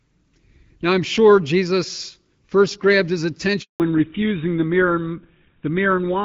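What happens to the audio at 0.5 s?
Nothing goes wrong at 0.5 s: the speech runs on intact through that moment, carried by the AMR wideband (HD Voice) codec at 12.65 kbit/s with only the light coding character that rate leaves behind.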